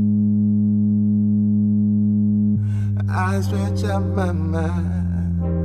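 Nothing stood out on listening to this audio.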